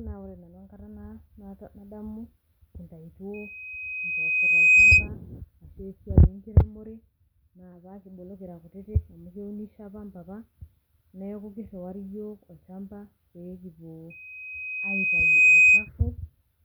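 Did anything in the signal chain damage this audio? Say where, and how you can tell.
Yes. At the analogue stage, loudspeaker feedback squeal appears at 3.34–5.09 s and 14.1–15.89 s. A 2.5 kHz tone swells over about a second and a half to roughly 15 dB above the speech, where the mic-to-speaker loop gain exceeds one. On a spectrogram it shows as a thickening horizontal line.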